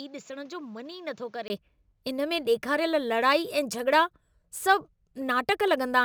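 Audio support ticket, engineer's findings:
Speech dull and band-limited from 0.0 to 1.5 s: no content above 7.6 kHz, level roughly 10 dB lower, different noise floor about 35 dB under signal. Brief 20 ms dropout at 1.5 s, then full band returns. Likely cause: input switched to a poorer device, a narrower-band mic path active at start before capture changed over.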